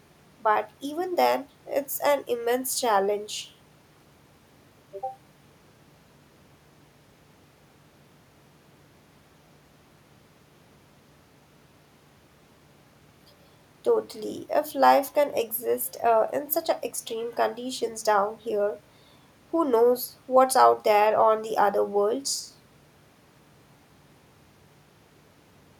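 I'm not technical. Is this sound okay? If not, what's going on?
Yes, it sounds fine.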